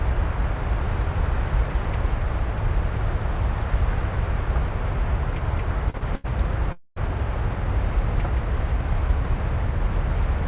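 At 5.90, 5.98 and 6.15 s the sound hangs briefly for 41, 29 and 92 ms with a faint buzz. Each is a short stall from a late packet: the jitter buffer ran empty, so the last sound was stretched until the data arrived.

At 6.72 s a call audio freeze lasts 0.26 s. A fading buzz drops to silence for 170 ms, then the audio resumes where it stopped. Packets were likely held up in transit, draining the buffer.

Throughout, the band stops at 4 kHz, as the G.711 mu-law call path imposes.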